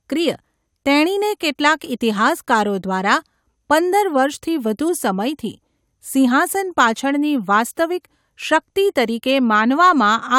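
No technical faults are audible at any point in the speech recording.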